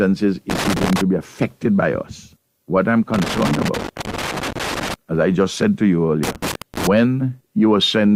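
Irregular bursts of crackle and scratching break into the sound three times: from 0.50 to 1.01 s, from 3.14 to 4.94 s, and from 6.23 to 6.87 s, the middle burst being the longest at about 1.8 s. This is loose connector crackle, where a worn or dirty contact keeps making and breaking as it shifts, chopping the signal on and off and adding pops wherever DC sits on the line.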